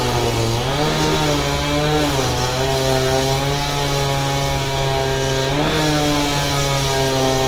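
Low-rate Opus compression in its music (CELT) mode is the likely cause of the damage to this recording of sounds, which fits a bitrate around 24 kbps. Across the whole clip, tones turn plainly grainy, rough and noisy, while the bandwidth stays full up to about 20.2 kHz.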